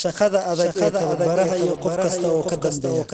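A second copy of the speech, about 5 dB quieter, trails about 0.7 s behind throughout, a doubled audio track likely caused by a delayed duplicate capture.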